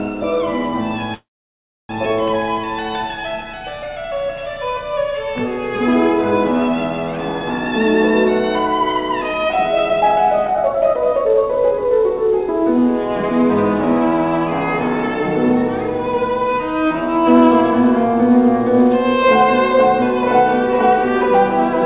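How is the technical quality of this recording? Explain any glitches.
The recording has two glitches, a stall near the start and a rushed stretch in the middle, carried over a narrowband call path whose bandwidth stops at 4 kHz, consistent with G.711 A-law telephony at 64 kbps.

From 1.14 to 1.91 s there is a call audio freeze. The likely cause is packets held up in transit, so the jitter buffer ran dry. The receiver stretched the last sound into a short fading tail, then went silent for about 0.66 s until packets resumed. Playback picks up exactly where it stopped, so nothing is lost, but roughly 0.75 s of extra gap is inserted and the delay grows by that amount.

From 8.82 to 12.41 s there is a jitter buffer speed-up. The buffer held more audio than its target and trimmed it by cutting many tiny pitch-period-sized slices in succession, removing roughly 0.7 s in total. The result is playback at about 120% speed with the pitch unchanged, so this passage sounds hurried and compressed in time before returning to normal pace.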